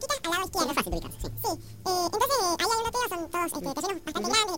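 From start to finish, the audio is read two samples at a time. It plays at double speed, an octave high.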